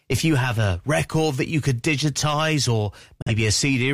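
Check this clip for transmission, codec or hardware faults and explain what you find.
One transmission fault: a digital broadcast dropout from 3.22 to 3.32 s, right after "you could digitize or". A lost frame made the receiver mute: a 3 ms fade into silence, then a clean return further on. About 43 ms of material is lost, which fits one frame. Unlike packet-loss concealment, nothing is smeared or repeated to fill the gap.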